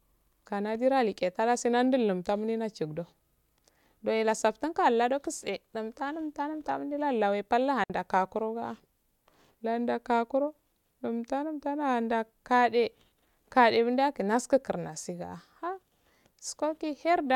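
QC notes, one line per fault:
7.84–7.90 s, digital wireless dropout: right after "lawe pal" the speech cuts to a clean 60 ms hole of near silence, with no crackle or noise burst at either edge. The radio link lost too much data, so the receiver muted briefly behind a very short fade instead of passing damaged audio. The waveform shows a sudden flat gap with slightly tapered edges. The spectrogram shows a narrow, empty vertical stripe across all frequencies.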